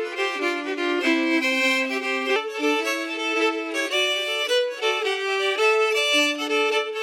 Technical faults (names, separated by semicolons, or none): section at the wrong speed